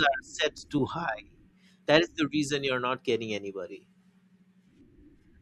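At 0.58 s a single sharp snap cuts across the speech, sitting on top of it rather than replacing it. This is an electrical switching spike, likely a nearby switch, motor or static discharge arcing briefly and coupling into the audio line.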